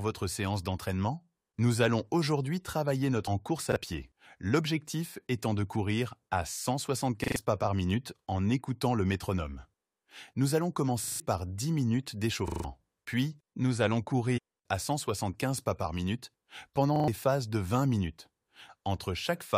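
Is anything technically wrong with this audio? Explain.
Yes, there are two kinds of fault in this speech.

Damaged data in a compressed stream occurs at 3.26 s and again from 14.36 to 14.39 s. Corrupted bytes in the encoded stream make the decoder misread a frame, lose sync and hunt for the next valid header. Each is heard as a brief chirp, squawk, click or short hole. Unlike a repeat, nothing recognisable is heard twice.

Repeated buffer occurs at 3.72 to 3.76 s, 7.24 to 7.36 s, 11.04 to 11.2 s, 12.48 to 12.64 s and 16.96 to 17.08 s. When fresh audio arrived late, the player looped the last chunk, and the 40 ms repeat period fits a 40 ms buffer. The chunk plays once more at 3.72 s, three more times at 7.24 and 16.96 s, and four more times at 11.04 and 12.48 s. This produces a rapid mechanical stutter with hard joins. Roughly 40 to 150 ms of speech is missing afterward. The repeated material is real speech, which distinguishes these faults from the decoder glitches.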